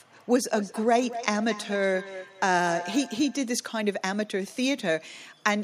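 Feedback echo between two devices, 0.49 to 3.49 s: another device replays this microphone's pickup back into it, so speech recurs about every fifth of a second.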